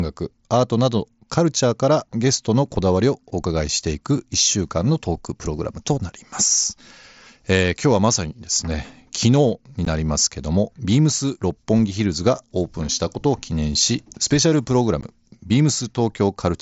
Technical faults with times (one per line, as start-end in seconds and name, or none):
9.85 unconcealed Bluetooth headset packet loss
15.01 unconcealed Bluetooth headset packet loss